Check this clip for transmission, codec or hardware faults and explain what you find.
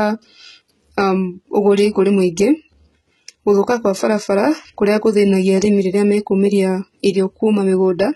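One codec fault runs through the whole clip. The upper spectrum stops sharply at 11.8 kHz, and the treble below that sounds synthetic: s sounds come out gritty and lispy, with a metallic sheen. This is likely HE-AAC compression, with spectral band replication copying lower bands upward under a coarse envelope, which fits a very low bitrate near 16 kbps. A plain low-pass filter would sound dull instead; here the brightness remains, but the harmonics above the crossover do not line up.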